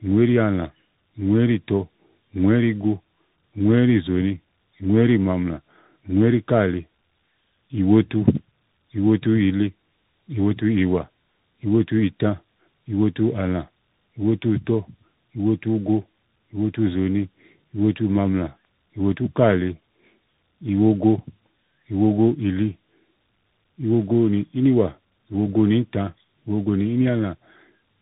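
Throughout the recording the speech passes through tandem speech coding: it was decoded and re-encoded at each network border, with a CVSD stage working on audio already shaped by an earlier AMR-NB coder and an intervening G.711 A-law link. Each coder adds its own errors to the previous one's, so the voice comes out rougher and more warbly than a single codec would leave it, and muffled, with nothing above 3.8 kHz.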